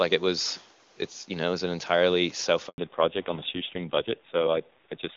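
At 2.68 s, right after "was an entirely", there is a handover gap: the call switches networks and no speech frames arrive for 100 ms. The sound fades out quickly and stays silent until 2.78 s, so that stretch of speech is lost.

From 2.78 s to the end comes a fallback to narrowband. Before it, the clip has the fuller band of the AMR-WB wideband codec. After it, everything above 4 kHz is gone, and the speech sounds dull and rough, consistent with AMR-NB at about 5.9 kbit/s.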